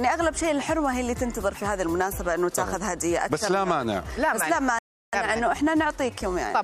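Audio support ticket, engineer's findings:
Playback stall, 4.79–5.13 s: output cuts to silence for 342 ms mid-flow, then resumes. Waveform shows a flat line, and the spectrogram shows a clean vertical gap across all bands. Likely cause is a player buffer underrun or blocked audio thread.

Time-compressed catch-up, 5.13 s to end: audio runs 1.1x fast at unchanged pitch. The player trims short segments and cross-fades the joins to clear its backlog. Spectrogram harmonics hold frequency while events crowd closer.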